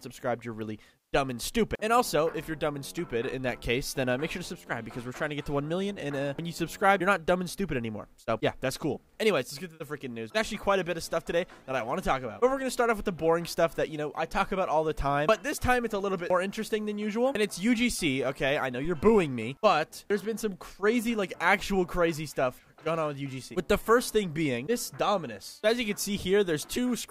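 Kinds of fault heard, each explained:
Phantom power thump: a supply switched on or off on a live input sends a step through the coupling capacitors, giving a deep, brief, unpitched thud at 18.85 s, peaking around -27 dBFS and dying away within about 63 ms. Its single low bump with a fast decay separates it from a click or ongoing hum.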